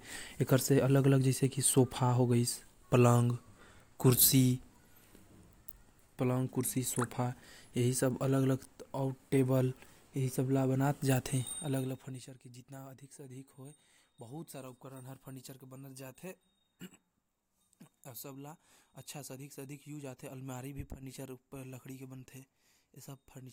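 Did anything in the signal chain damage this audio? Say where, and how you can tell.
No, nothing in the signal chain damaged this audio.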